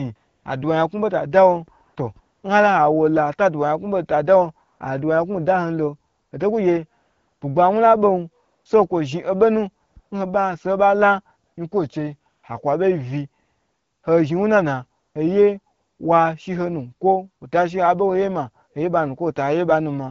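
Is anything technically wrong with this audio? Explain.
Yes. AMR comfort noise appears fourteen times, from about 0.15 s to 16.0 s, in gaps of 100 to 600 ms; the longest runs from 13.43 to 14.03 s, and one falls between "lo hoto kugye" and "bugbawu la bon so" at 7.01 s. The phone treated these moments as silence and stopped sending speech frames, so the receiver synthesised smooth, steady noise from a rough level and spectrum estimate. The real background drops out and this even hiss switches in and out. The wideband speech coding itself sounds clear, with only light coding damage.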